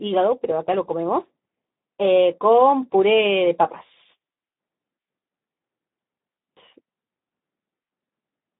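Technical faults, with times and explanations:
Throughout, Speex codec: the speech is squeezed into a phone-like band of roughly 150 Hz to 3.7 kHz, with nothing above 3.8 kHz, and has a grainy, hoarse edge because the excitation gets too few bits, which fits a rate around 11 kbps.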